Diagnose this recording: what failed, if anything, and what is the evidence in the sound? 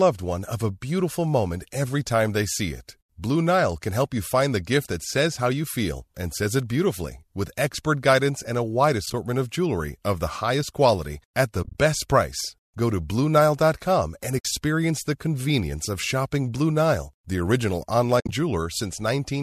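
AAC frame loss with muting at the network stage: the decoder zeroed the lost frames, leaving soft-edged dips and holes, 30 to 90 ms of lost audio per event, at 9.06–9.14, 11.63–11.75, 14.39–14.45 and 18.20–18.32 s.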